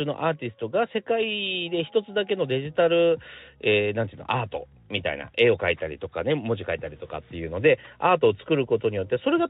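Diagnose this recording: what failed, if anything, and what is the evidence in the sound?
Nothing failed; no faults found.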